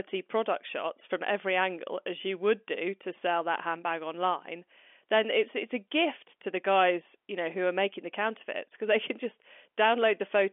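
Nothing goes wrong anywhere in this speech clip; it simply carries the narrow band of ordinary G.711 telephone coding, roughly 250 Hz to 3.4 kHz, which is just how a standard phone line sounds.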